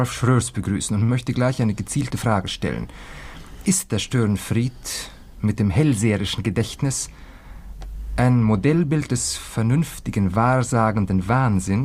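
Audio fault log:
1.03–1.11 s, short stall from a late packet: a packet arrived late, so the receiver held the last sound about 53 ms, nothing lost, just a brief drawn-out sound with a slight buzz or dip.
6.46–7.67 s, jitter buffer speed-up: the receiver trimmed tiny pitch-period slices to shed about 50 ms of backlog, so things run roughly 3% fast, same pitch.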